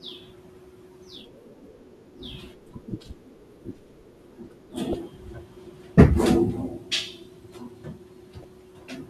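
A short glitch breaks into the speech twice, first from 4.91 to 4.95 s and again from 8.41 to 8.45 s, each lasting roughly 35 ms. Both are damaged data in a compressed stream. Bytes in the encoded file were lost or corrupted at those points, so the decoder misread those frames, lost its place in the bitstream and had to hunt for the next valid frame header before normal decoding could resume.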